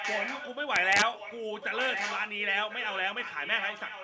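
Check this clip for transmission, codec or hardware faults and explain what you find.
Two kinds of fault are present: an echo leak through most of the speech and a short burst of integer overflow.

Echo leak, from 0.0 to 0.56 s, 1.15 to 2.37 s, 2.55 to 3.01 s and 3.18 to 4.03 s: the far end's echo canceller likely missed its loudspeaker pickup, so the speech returns about 1.05 s late. The echo is somewhat below the speech in the first two stretches and well below it in the last two.

Integer overflow, from 0.76 to 1.02 s: peaks pushed about 1 dB past full scale wrapped to the opposite sign instead of being limited, producing harsh cracks far sharper than clipping.

The call's microphone processing band-limits the sound at 8 kHz.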